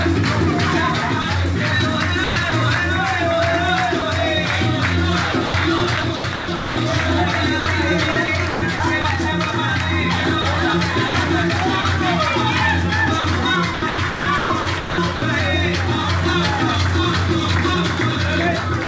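At 1.22 to 1.24 s and again at 4.00 to 4.02 s, about 20 ms of the sound is dropped by the voice detector and replaced by a short patch of steady comfort noise, likely because the sender's detector briefly classed the signal as background and paused transmission. The same thing clips the final 40 ms, from 18.84 s to the end.

Between these, the sound is chopped by the voice detector over five stretches: 2.24 to 2.52 s, 5.32 to 6.76 s, 7.60 to 9.04 s, 10.42 to 11.84 s and 13.20 to 15.22 s. Here the detector likely toggled sending on and off repeatedly. This replaced 100 to 760 ms per stretch with synthetic noise, giving a choppy, gated sound. The largest loss, 760 ms, comes in the last stretch. Throughout, the call path's bandwidth stops at 8 kHz.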